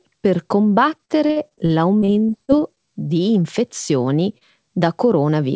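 Repeated packet loss (robotic sound) runs from 0.98 to 2.80 s: over a dozen holes, the longest 43 ms, are patched by extending earlier sound, giving choppy speech with pieces missing. A jitter buffer slow-down follows from 2.78 to 3.05 s, where repeated pitch periods add 52 ms so the speech plays at 84% speed, drawn out at unchanged pitch. Short concealed packet loss at 4.38 to 4.44 s fills about 30 ms of missing audio with continued sound, heard as a brief smear within the band-limited G.722 call audio, which has nothing above 8 kHz.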